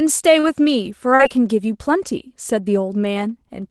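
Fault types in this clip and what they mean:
Short concealed packet loss: about 40 ms of the call arrived too late twice, near 0.39 s and 1.15 s. The receiver papered over each gap by stretching the preceding sound and then blending back, so you get a quick smear or wobble in the speech.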